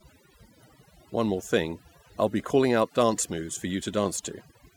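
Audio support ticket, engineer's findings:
Overdone noise removal, full clip. Background drops and breaks up into twinkling specks. Probable component: noise reduction stage, set far too aggressive. Mechanism: per-band suppression driving any band close to the estimated noise floor down or off, so low-level speech detail drops out along with the noise, and isolated bands flicker through as artefacts.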